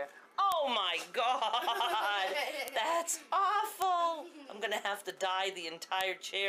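Bit error spikes at 0.52, 2.68, 3.82, 5.10 and 6.01 s: single flipped bits make isolated broadband ticks, peaking around -10 to -22 dBFS, unrelated to the surrounding sound.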